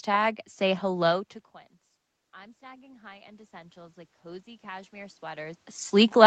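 From 2.33 s to 6.02 s there is automatic gain rising. The input dropped by about 22 dB, so the gain control slowly added about 12 dB, lifting speech and room noise together. The waveform's envelope and noise floor climb steadily, and the spectrogram brightens evenly.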